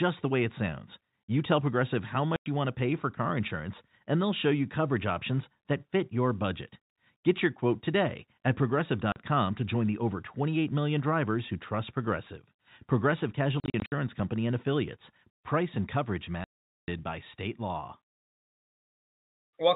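Packet loss filled with silence chops the speech with hard-edged gaps at 2.36 s before "you want to pay", 9.12 s after "your quote today at", scattered dropouts from 13.6 to 13.92 s, and a 440 ms hole at 16.44 s after "and coverage". The gap lengths fit 20 ms packets.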